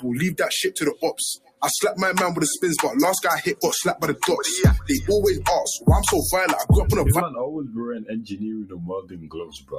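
From the start, a noise suppressor applied to sounds it was not built for treats sustained tones and tails as noise, so the level pumps by around 10 dB. A waveform shows a breathing envelope, and a spectrogram shows steady bands fading in and out.

The sound cut by the noise suppressor is clearest where held or decaying material collapses: 1.36–1.62 s (about 20 dB down), 8.02–8.37 s (about 12 dB), 8.64–8.84 s (about 13 dB), and from 9.01 s to the end (about 17 dB). Each shows as a sudden waveform dip and a darkened spectrogram gap, with transients still intact.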